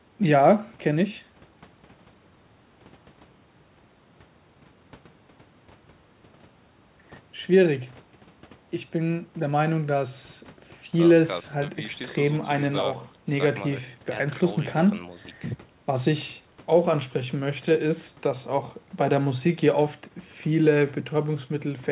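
No faults to report: the speech arrives over a WebRTC call path with nothing above 4 kHz, a narrowband ceiling consistent with G.711 mu-law at 64 kbps.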